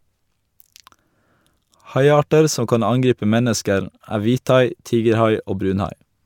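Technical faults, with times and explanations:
Nothing stood out on listening to the speech recording.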